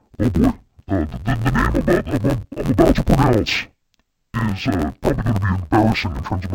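Interleaved audio read as planar runs through the whole of this speech clip. Each 11.61 ms block's alternating left-right samples are split into halves and played together, so the speech turns dull and robotic with an 86.1 Hz buzz at the block rate, which fits a 512-sample block.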